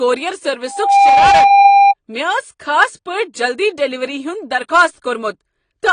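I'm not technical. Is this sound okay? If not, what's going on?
No. From 0.67 to 1.94 s there is a loudspeaker feedback squeal. The microphone picked up its own speaker, and one tone near 800 Hz kept feeding itself. It swells over about a third of a second and ends up well above the speech.

The whole clip also shows plainly audible damage from compression, most likely AAC compression. To save space, the encoder threw detail away. Nothing above 9.9 kHz survives, so the crisp top of the speech is missing throughout.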